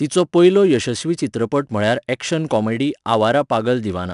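Throughout, 4-bit ADPCM compression codes each sample as a coarse step from a prediction, leaving gritty, level-following hiss on the speech; nothing sounds above 10.6 kHz.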